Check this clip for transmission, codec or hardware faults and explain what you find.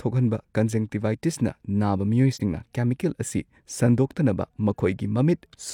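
One fault: AAC frame loss with muting. From 2.33 to 2.41 s the speech fades to a brief, soft-edged dip, consistent with one lost AAC frame whose spectrum the decoder zeroed, with overlapping windows smoothing the edges.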